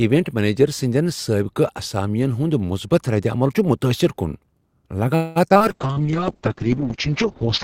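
At 5.15 s the speech stalls for about 0.2 s, until 5.38 s. This is a call audio freeze. The last sound is carried on as a fading buzz or hiss rather than silence, and then the speech resumes exactly where it left off. The likely cause is packets held up in transit, which drained the jitter buffer. Nothing is lost; instead about 203 ms of extra delay is inserted into the call.

Right after the freeze come three bursts of short concealed packet loss, at 5.50–5.52 s, 5.54–5.57 s and 5.59–5.62 s. Each hole was filled by extending the preceding sound and crossfading back into real audio. About 20 ms of speech is gone at each of the first two and about 40 ms at the third. They come across as quick smears or wobbles, and brief sounds inside those spans can drop out. The third also pulls the playout delay back by roughly 30 ms.

From 5.69 s to the end of the clip there is a call bitrate drop. The encoder falls from 64 kbps to 6 kbps after the bandwidth estimate collapsed. 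Opus at that rate codes coarsely and narrows the audio band from 20 kHz to about 6 kHz. The speech turns muffled and rough, with a watery texture, and it stays that way for the last 1.95 s without recovering.

Overlapping that, from 5.87 s to 6.12 s, there is a jitter buffer slow-down. The receiver rebuilds its reserve by repeating single pitch periods and pause fragments, adding 55 ms. Playback runs at about 82% speed with the pitch unchanged, so sounds are stretched out and a slight warble can be heard.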